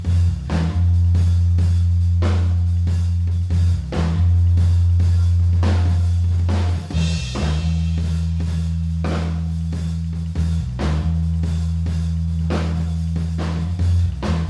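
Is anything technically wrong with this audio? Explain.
No, no technical faults.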